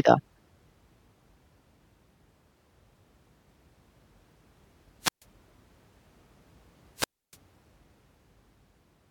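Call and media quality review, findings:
Speech cuts out twice: brief hiss swell, near-silent hole, speech back. 5.00–5.25 s (135 ms mute); 6.95–7.38 s (292 ms mute). Wireless microphone squelch dropout: analogue FM link's RF fades, receiver squelch mutes output until signal recovers.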